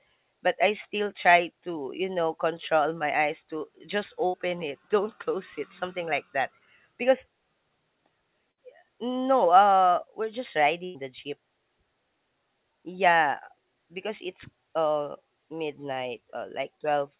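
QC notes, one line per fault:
4.26 to 4.35 s, 8.51 to 8.59 s and 10.85 to 10.97 s, burst of packet loss: consecutive packets failed to arrive in time, so the receiver concealed each gap by extending and fading the last sound, about 73, 59 and 95 ms of fill. The speech then picks up further on, with roughly 80, 60 and 100 ms lost, right after "my eyes to just", just before "no uh we're just", and between "no uh we're just" and "the jeep".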